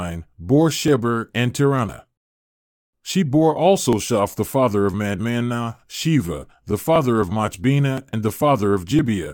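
Speech with periodic USB or driver dropouts: from 0.88 s to 8.99 s a short tick recurs every 1.01 s, around ten in all. At each one, roughly 10 ms of audio is skipped, so the waveform jumps rather than falling silent. The metronomic spacing is the tell. Network packet loss or a failing cable would produce irregular gaps. Here a background task stalling the bus or driver at a fixed interval produces clicks that land on schedule whenever the speech carries signal.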